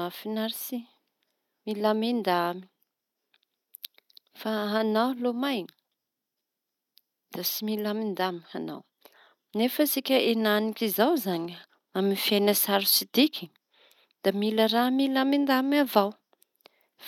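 No technical faults can be heard anywhere in the recording; the signal holds steady and continuous throughout.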